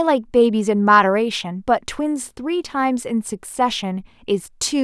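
Nothing in the speech stood out as a problem on listening.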